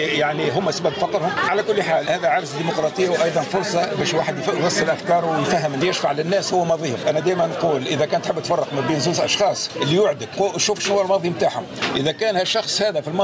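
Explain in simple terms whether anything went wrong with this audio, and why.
Something did go wrong. Throughout the clip, the level keeps getting pulled down on loud sounds, a large, noticeable swing that makes everything sound squashed and uneven. This is gain pumping, likely caused by the microphone level being set far too high so that a fast automatic limiter keeps yanking the volume down on every loud moment.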